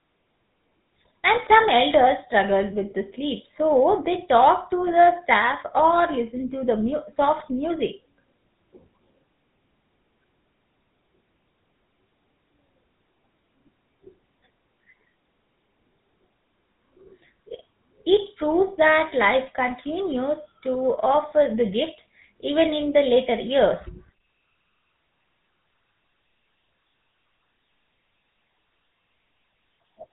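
From start to finish the speech carries GSM full-rate codec damage, plainly audible as a buzzy, gravelly roughness. The coder rebuilds the voice from a vocal-tract model fed by sparse regular pulses. A spectrogram shows nothing above 3.8 kHz and smeared, striated harmonics, which fits roughly 13 kbps.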